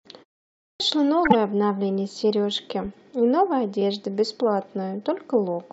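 Speech, with a clipped start after a pause at 0.69 s: after about 0.53 s of silence the output wakes late, losing roughly 110 ms, so the speech starts abruptly out of silence. A corrupt frame decoded at 1.24 to 1.35 s and again at 2.84 to 2.96 s gives brief chirpy bursts where damaged data spanning several frames was played anyway, visible on a spectrogram as misplaced bright energy smeared across unrelated frequencies.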